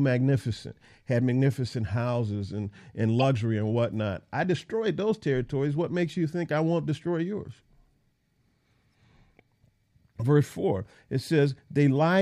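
A decoder fed damaged compressed data played it anyway. This corrupt frame decoded fault appears twice. At 3.20 to 3.24 s, between "magnificent houses and and" and "and whatnot I destroyed", flipped bits in what sounds like two consecutive frames misplace energy across the spectrum, giving a fairly loud chirp, squeak, blip or burst of noise. At 10.20 to 10.22 s a single frame is hit, and its glitch is much fainter.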